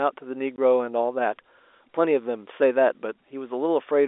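At 0.56 to 0.58 s the speech drops into a brief hole of dead silence, a case of packet loss filled with silence. One stretch of audio, consistent with a single 20 ms packet, never arrived, and the receiver inserted silence instead of concealing the gap. That gives it hard edges. A concealed loss would smear or repeat the preceding sound instead. The narrow telephone band of the G.711 coding remains audible throughout.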